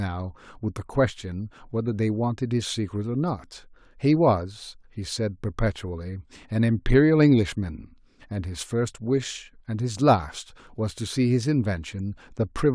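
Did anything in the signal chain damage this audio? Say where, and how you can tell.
No, nothing in the signal chain damaged this audio.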